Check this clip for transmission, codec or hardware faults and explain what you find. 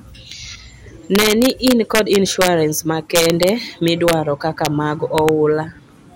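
Violent, sharp cracks, harsher than clipping, break through the loud speech at 1.15–2.48 s, 3.16–3.49 s, 3.88–4.13 s, 4.65 s and 5.18–5.29 s. This is integer overflow: peaks pushed past the integer limit, by about 2 to 3 dB in the earlier stretches and only just in the last two, wrap to the opposite sign instead of being held, flipping across the full range.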